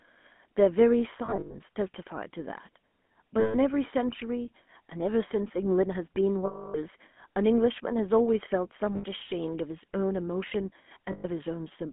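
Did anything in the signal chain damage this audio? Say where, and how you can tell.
Yes. At the codec stage, it's the GSM full-rate codec throughout: buzzy, gravelly and cut off above 3.4 kHz, which fits a 13 kbps phone path.

On the network, lost GSM frames near 1.26, 3.40, 6.46, 8.96 and 11.12 s each leave a short metallic ring, from the decoder repeating the last good frame while fading it.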